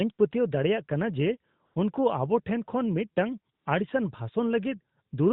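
At 1.66 s the speech drops into AMR comfort noise for 100 ms, and again at 3.54 s for 120 ms. The sender judged those moments silent and stopped sending speech frames. The receiver filled each gap with steady, smooth synthetic noise, switching in and out abruptly. The narrowband codec carrying it has a light, band-limited sound that fits AMR-NB near 12.2 kbps.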